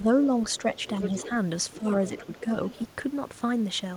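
Right at the start, 0 to 0.08 s, the talker dips slightly: speech suppressed in double talk, likely the echo canceller ducking everything when both ends overlapped. It comes back stronger at 1.78 to 1.86 s, with a drop of about 10 dB, and as a long, milder sag from 2.17 to 2.51 s.

Around those, the other side's voice leaks through. There's a clear stretch from 0.85 to 1.3 s, roughly 10 dB under the talker, then faint scraps at 1.72 to 1.77 s and 2.71 to 2.87 s. That's likely loudspeaker echo the canceller didn't fully remove.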